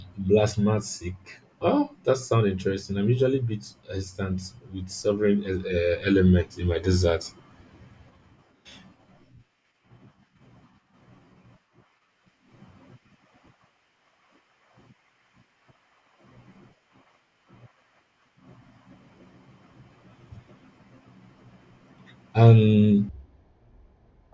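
From 23.09 s to the end at 24.33 s, a wrong sample rate fault drops the speech to one third speed and about 19 semitones lower, slow and deep. The samples are clocked out unconverted, which fits 48 kHz material played at 16 kHz.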